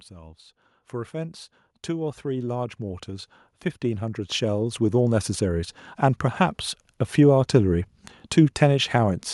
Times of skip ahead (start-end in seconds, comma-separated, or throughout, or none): none